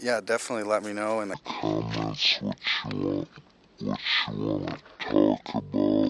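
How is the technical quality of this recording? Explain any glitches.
The recording has one serious fault: from 1.34 s to the end, a wrong sample rate makes the sound run at half speed and an octave low. Playing the samples at half their intended rate without conversion stretches every event to twice its length and lowers every frequency by 12 semitones, which fits 48 kHz audio being played at 24 kHz. On a spectrogram, all content drops to half its frequency and features widen in time. On the waveform, cycles and envelopes stretch visibly.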